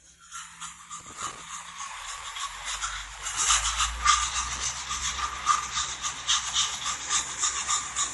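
Throughout, the audio has plainly audible watery, swirling artefacts and nothing above 11.4 kHz, likely MP3 compression at a low bitrate near 48 kbps, which zeroes weak frequency lines.

Loose connector crackle occurs from 1.00 to 1.42 s and again from 4.56 to 4.65 s: an intermittent contact chops the signal, producing irregular bursts of scratchy crackle.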